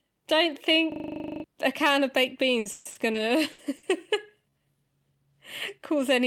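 From 0.92 to 1.44 s, just before "a can of baked", the audio locks into a rapid rattling buzz at 25 Hz, the same 40 ms fragment repeating 13 times. This is a system hang loop: the computer stalled while the sound hardware kept replaying its ring buffer, and roughly half a second of real audio never played.

Right after "a can of baked", from 2.59 to 3.86 s, the speech turns choppy, with pieces missing. This is repeated packet loss. Five gaps open in quick succession, the longest 140 ms, and each is patched by stretching the preceding sound. About 370 ms is concealed this way, nearly a third of the stretch.

Inside that choppy passage, at 3.13 to 3.17 s, the speech lurches forward with almost no break. This is a skip ahead. A small piece of audio, under a tenth of a second, was dropped while later audio was already waiting, shortening the delay by around 50 ms and splicing the two sides together.

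From 3.25 to 4.77 s the speech drags at about 94% speed with its pitch unchanged, and sounds are drawn out. This is a jitter buffer slow-down. The receiver repeated single pitch periods and bits of pauses to rebuild its reserve, adding 104 ms.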